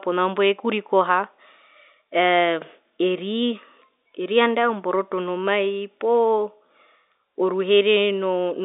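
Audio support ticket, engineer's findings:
No faults found; G.711 telephone path sounds normal.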